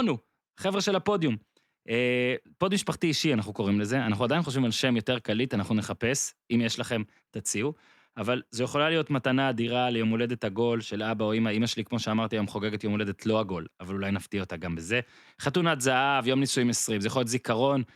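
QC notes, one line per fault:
No faults heard anywhere in this speech recording.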